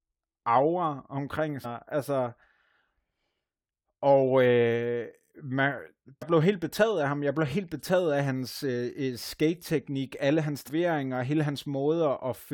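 Right after "aura omkring" at 1.64 s, after "og øh man" at 6.21 s (just before "blev helt betaget af"), and after "alle hans" from 10.67 to 10.69 s, you get a quick blip. That's damaged data in the compressed stream: the decoder hits bad frames, loses sync and glitches until it finds a clean header.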